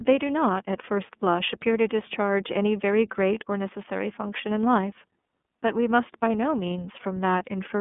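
From start to finish the speech carries iLBC codec damage, and it is plainly audible. The sound sits in a telephone-style band from about 200 Hz to 3.5 kHz, with nothing above 3.7 kHz. Each 30 ms frame's excitation is coded on its own, which fits iLBC's 13.33 kbps mode, so the voice comes out slightly rough and synthetic. A simple band-limiting filter would muffle the sound without adding that buzzy, frame-by-frame texture.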